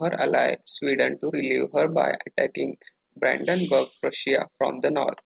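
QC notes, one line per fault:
No faults found in this speech clip, which runs over a WebRTC call path working normally with G.711 mu-law at 64 kbps, so nothing is heard above 4 kHz.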